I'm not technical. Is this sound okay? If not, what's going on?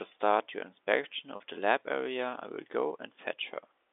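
No, there's one small hiccup. At about 1.36 s the speech briefly hangs for around 40 ms, until 1.40 s, with a faintly buzzy, held-on quality. That's packet loss with pitch repetition. A short chunk of the audio, which fits a couple of lost packets, never arrived, so the receiver filled the gap by replaying the last tiny cycle of the voice. All of this comes through narrow, landline-style telephone sound.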